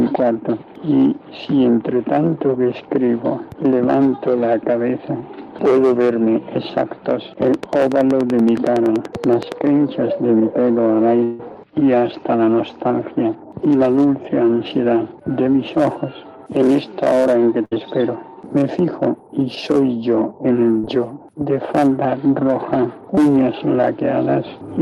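A train of clicks runs from 7.54 to 9.53 s: roughly twenty sharp, similar ticks at a regular pace of about 10.6 per second, peaking around 10 dB above the surrounding sound. They are audible on top of the material and in any quieter moments. Such a steady repeating pulse is likely interference from nearby equipment or a faulty connection or power supply, injecting the same impulse again and again.

A long network dropout follows from 11.23 to 11.41 s. About 160 ms of audio failed to arrive, and the receiver covered nearly all of it, about 155 ms, by extending the last sound into a fading buzz or hiss. No true silence appears. That stretch was most likely lost in transit, so playback picks up further on with the missing portion simply gone.

A burst of packet loss occurs from 17.65 to 17.73 s, where about 60 ms went missing in a row. The decoder bridged the hole for about 64 ms by carrying the preceding sound forward and lowering it as the gap continued. 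This produces a brief held, fading buzz or hiss before the audio jumps ahead past the lost section.

Short concealed packet loss appears twice: from 20.79 to 20.85 s, with about 40 ms missing and 37 ms filled, and from 23.15 to 23.19 s, with about 20 ms missing and 18 ms filled. Each time, packets arrived too late for the decoder. The gap was patched by continuing the prior sound and then blending back in, leaving only a quick smear or wobble.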